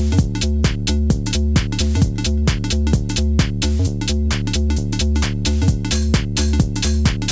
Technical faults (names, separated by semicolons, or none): none